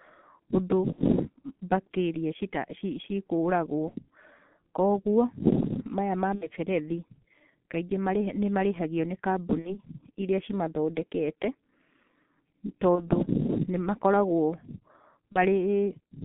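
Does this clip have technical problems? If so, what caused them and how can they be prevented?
Yes. The whole clip of speech has passed through the G.723.1 codec. Its 30 ms frames and very low rate, consistent with about 6.3 kbit/s, leave the voice muffled and hoarse with smeared consonants, and the line band runs only from 150 Hz to 3.6 kHz. On a spectrogram, energy stops sharply near 3.6 kHz, and harmonics look blocky and coarse over time. To prevent this, use a wideband or higher-rate codec such as G.722 or Opus.

There is also VoIP packet loss concealed by the speech codec at 0.92–1.01, 3.89–3.94, 6.35–6.48, 9.59–9.81, 12.95–13.09 and 15.32–15.38 s. The gaps fit one or two lost 30 ms frames. In each gap the decoder keeps repeating its last pitch and filter at falling gain, so the speech stretches into a fading buzz or coloured noise and stays weak briefly afterwards. A spectrogram shows smeared, flat harmonic bands, and a waveform shows a decaying, repetitive envelope. 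To prevent this, reduce network loss with QoS prioritisation, a suitably sized jitter buffer, or forward error correction.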